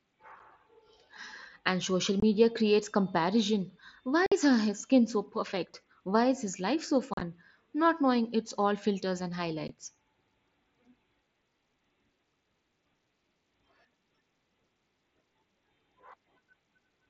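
Unconcealed Bluetooth headset packet loss punches abrupt holes into the speech at 0.39 s, 2.20–2.23 s, 4.26–4.32 s before "her his skin so", 7.14–7.21 s after "is his life so" (scattered dropouts, longest 37.5 ms), and 9.68 s after "it's all filters and". Lost mSBC frames were replaced with silence or an idle pattern rather than concealed, so each gap has abrupt edges. On a waveform these show as flat cuts; on a spectrogram they are vertical blank slots.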